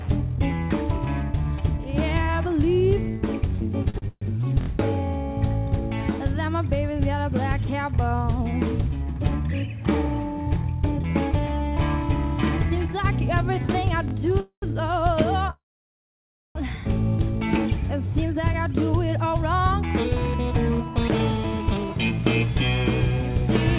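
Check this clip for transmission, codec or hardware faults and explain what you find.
Yes, the clip has four kinds of fault: a stutter, two repeated buffers, two freezes and a late speed-up. The band stops at 4 kHz, as expected of the G.711 A-law call codec it passed through.

Repeated stalls (stutter), 3.9 to 4.24 s: the sound drags and catches three times. Packets arrived late, so the jitter buffer kept running dry and the receiver stretched the last sound to fill 214 ms. The longest fill is 134 ms, and together the fills cover 64% of that stretch.

Repeated buffer, 4.61 to 4.68 s and 14.08 to 14.13 s: a tiny fragment replays with hard joins, heard as a brief stutter or buzz. It plays three extra times in the first event and twice in the second. Each piece is 23.22 ms long, which fits a 1024-sample device buffer re-sent when fresh audio was late.

Call audio freeze, 14.40 to 14.64 s and 15.50 to 16.57 s: the sound hangs on, fades out, then resumes exactly where it stopped. 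There are 110 ms of silence in the first and 960 ms in the second. The likely cause is packets held up in transit, leaving the receiver to fill 221 ms and about 1.05 s respectively.

Jitter buffer speed-up, 18.25 to 23.42 s: the audio sounds hurried at unchanged pitch, running at 106% speed. After the delays the buffer was overfull, so the receiver trimmed tiny pitch-period pieces repeatedly, removing about 0.3 s in total.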